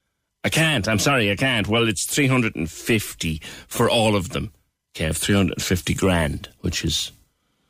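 Listening through the speech, nothing stood out as a technical problem at any point.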